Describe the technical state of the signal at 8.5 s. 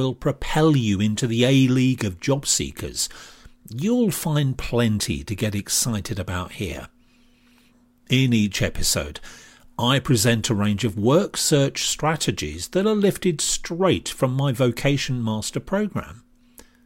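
At 8.5 s the speech signal is intact, with no audible fault at that point.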